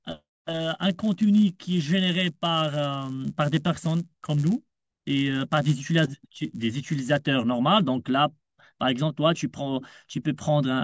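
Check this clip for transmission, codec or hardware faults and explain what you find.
There's one fault, in the first 7.3 seconds. From 0.0 to 7.27 s the resampler restarted on every block. Each 10 ms block was converted alone, leaving edge errors that buzz at 100 Hz under the speech.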